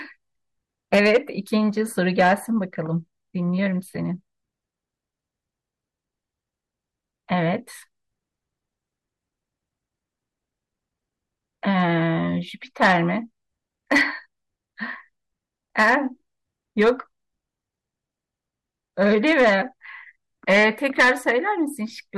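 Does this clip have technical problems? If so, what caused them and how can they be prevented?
Yes. Hard clipping runs through the whole speech clip. The signal was driven about 8 dB beyond what a stage in the chain could pass, so the loudest peaks are sliced flat instead of following their natural curve. Less than one percent of samples reach that ceiling. The squared-off tops add harsh high-frequency harmonics. Setting input gain so peaks stay well below full scale, or adding a limiter before the converter, would prevent it.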